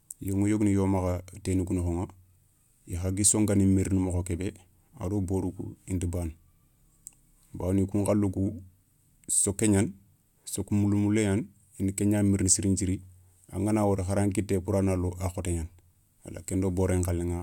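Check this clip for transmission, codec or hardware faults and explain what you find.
No faults turn up on listening: the speech signal stays continuous and steady throughout, with nothing in it that points to a problem anywhere along the path that captured, encoded or carried it.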